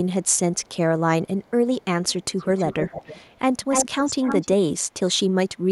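Faint delayed repeats of the speech, about 343 ms late, surface at 0.23–0.39, 0.58–0.69, 1.25–1.51 and 1.81–1.85 s. A much louder copy, 296 ms behind, runs through 2.08–3.39 and 3.7–4.46 s. This echo leak likely comes from a loudspeaker-side echo canceller passing its microphone pickup back.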